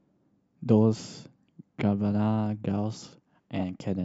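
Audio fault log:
No audible faults detected.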